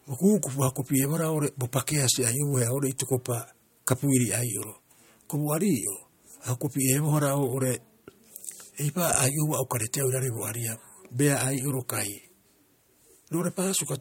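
Listening to this speech recording, nothing technical stood out at any point.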